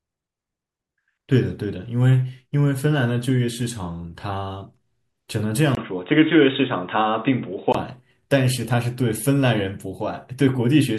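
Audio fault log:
5.75–7.75 s, input switched to a poorer device: after a 20 ms gap, sound is cut off above 3.8 kHz with faint new background noise, likely a narrower-band input.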